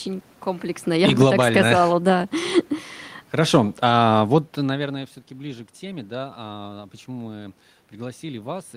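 From 0.87 to 1.41 s, and again from 3.37 to 4.92 s, automatic gain falling pulls the speech down by about 6 dB and then about 4 dB as the control judges the input too loud or its background noise too strong and eases its gain back. The room noise sinks along with the speech. When the talker moves, near half a second and around 4.5 s, the level of the voice shifts.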